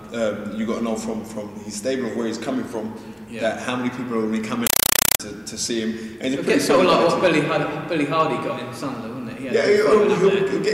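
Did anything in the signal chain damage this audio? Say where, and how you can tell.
Yes, at the playback output. From 4.67 to 5.20 s the audio becomes loud, chattering static: a compressed stream played as audio. Noise bursts of about 5.3 ms repeat 31.25 times a second with silence between. That pattern fits undecoded Dolby Digital frames treated as ordinary samples.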